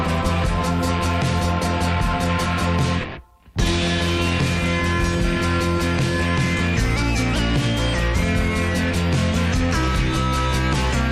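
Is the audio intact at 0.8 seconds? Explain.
Yes, the audio is intact at 0.8 seconds, with no dropout, click, distortion or other fault audible at that moment.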